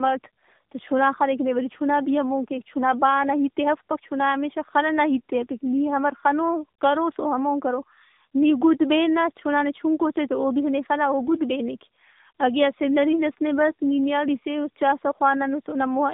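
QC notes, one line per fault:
Throughout, tandem speech coding: the speech sounds like it went through a narrowband AMR-style coder twice, with a plain telephone link between. The second pass re-codes the first one's damage, so it's rougher and more warbly than one hop, and everything stops at 3.7 kHz.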